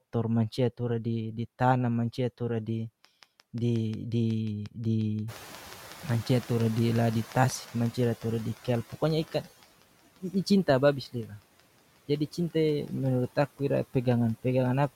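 Noise suppressor artifacts run through the whole of this speech recording. The suppressor pulls down bands it judges to be steady noise, by about 15 dB, frame by frame. The background therefore dips between phrases and swells under them. A train of clicks runs from 3.05 s to 14.85 s: sharp, similar ticks at a regular 5.6 per second, around seventy in all and peaking roughly 5 dB above the speech. They carry on through the pauses, likely from electrical interference or a faulty connection or power supply. The noise suppressor catching up is audible from 5.27 s to 8.91 s. The room noise jumps by about 21 dB around 5.5 s, and the suppressor's noise estimate trails behind it. The louder noise passes through with less reduction at first, then sinks by about 11 dB over 3.64 s as the estimate adapts. Speech cut by the noise suppressor occurs between 11.12 s and 11.43 s. The suppressor mistakes part of the speech for background and drops it by up to about 18 dB. 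Roughly a tenth of a second of sound comes out swallowed and faint.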